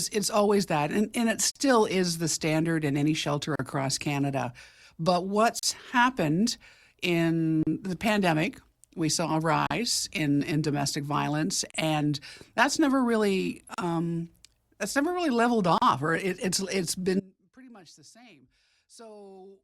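Short silences open in the speech at 1.51, 3.56, 5.59, 7.63, 9.67, 11.71, 13.74 and 15.78 s: a gap at a join of encoded pieces. Separately encoded two-second segments were butted together untrimmed, leaving about 46 ms of encoder delay and padding at the first join and about 38 ms thereafter. From 17.2 s to the end, an audio dropout to a faint residue leaves only a weak leak roughly 25 dB down, likely from signal loss upstream while the downstream path stayed live.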